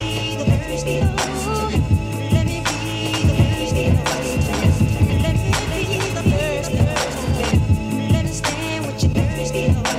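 From 3.1 s to 7.5 s the music is shadowed by a second copy about half a second behind, a few decibels quieter, full-band and dry, cutting in and out abruptly. This doubled audio track is likely a second capture through a slower path.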